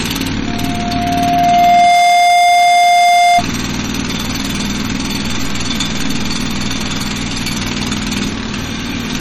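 Across the whole clip the sound carries plainly audible coding damage, most likely from MP3 compression at a low bitrate, roughly 32 kbps. Nothing survives above 17.4 kHz, where the encoder has cut the treble outright. Below that, the encoder has too few bits to go round, so weak frequency components are dropped and restored from frame to frame, giving a watery, swirling texture, with metallic chirps on bright detail and softened, smeared attacks.

From 0.46 s to 3.44 s a loudspeaker feedback squeal rises over the audio. A microphone is picking up the loudspeaker it feeds, and at 703 Hz the loop gain has exceeded one, so that frequency reinforces itself on every pass. The tone swells over about a second and a half into a steady howl sitting around 10 dB above the rest of the sound, then stops when the loop is broken.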